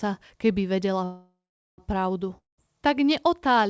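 From 1.04 to 1.80 s a call audio freeze stretches the last sound into a fading buzz, then roughly 0.42 s of silence. The speech resumes exactly where it stopped, so nothing is lost and everything after arrives about 0.74 s late. This is likely from packets delayed until the jitter buffer ran dry.

From 2.38 to 2.60 s a long network dropout likewise fades out and falls silent for about 0.16 s. Unlike the freeze, about 0.2 s of speech never returns, so the speech jumps ahead rather than resuming in place.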